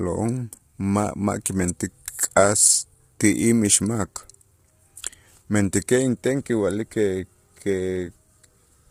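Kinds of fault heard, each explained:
Low-delay AAC compression: The speech sounds rough and grainy all the way through, with a hiss filling the gaps between the harmonics and nothing at all above about 15.6 kHz. That's likely a low-delay AAC codec such as AAC-ELD, which uses very short frames, so it can't separate pitch harmonics cleanly and burns bits doing it. The damage here is heavy, which fits a bitrate of around 24 kbps.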